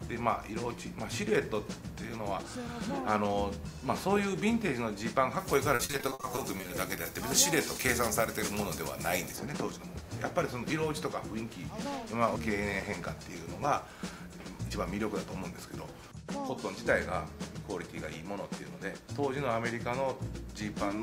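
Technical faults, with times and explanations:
5.40 to 9.36 s, pre-emphasis left on: the treble rises steadily from the midrange upward, reaching about 14 dB above the 1 kHz level by 10 kHz, which fits the FM 75 µs curve with its matching de-emphasis never applied. Sibilance and top end turn thin and hard. Unlike a narrow resonance or a high-shelf tweak, the lift is a smooth, continuous slope.
5.75 to 6.71 s, repeated packet loss (robotic sound): within that brighter stretch the sound keeps breaking into short holes, the longest about 60 ms. Each hole is papered over by stretching the preceding fragment, so roughly a third of the span, about 320 ms, is concealment rather than real signal. The result is a choppy stutter with pieces missing. Plain dropouts would fall silent, whereas here the gaps are filled with repeated material.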